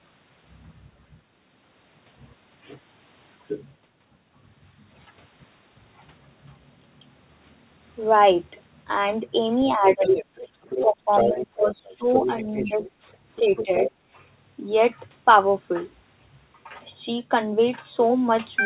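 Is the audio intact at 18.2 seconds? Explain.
Yes, the speech at 18.2 seconds is intact, with no dropout, glitch or distortion at that point, only the normal narrowing of a phone call that leaves nothing above 4 kHz.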